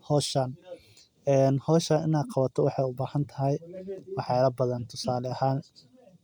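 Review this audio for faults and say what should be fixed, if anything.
Nothing to fix: no faults were found in the speech, so no corrective action is needed.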